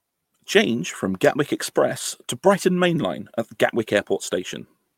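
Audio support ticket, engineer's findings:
No audible faults found in this speech recording.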